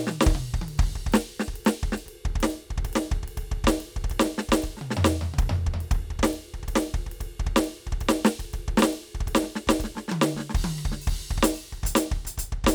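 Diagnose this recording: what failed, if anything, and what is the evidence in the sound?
The music plays twice throughout, a dry second copy about half a second behind at roughly equal level: a doubled audio track, likely from a slower second capture path.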